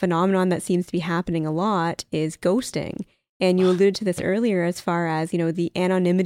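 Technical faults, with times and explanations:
No technical faults are heard in this speech clip.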